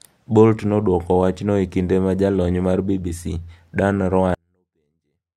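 At 4.35 s the speech suddenly falls away to a near-whisper and stays there until the end at 5.37 s. That's a 24-bit alignment error, and it leaves the audio too quiet. The samples were packed into the low 24 bits of 32-bit words but read back as full 32-bit integers. That shift knocks the level down by about 48 dB in one step. The sound is still clean, just almost inaudible.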